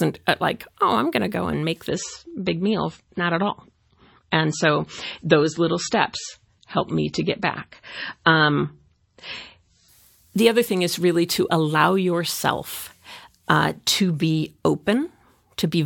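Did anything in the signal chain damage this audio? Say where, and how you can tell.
Yes: an adaptive stream at a lower bitrate on the network side. From 1.89 to 9.89 s, after "to go and make", nothing is heard above 8 kHz, and the sound turns swirly and artefact-laden, as a fall from roughly 128 to 24 kbit/s MP3 would cause. Quality switches abruptly with no gap, unlike packet loss, and recovers before "the other thing is".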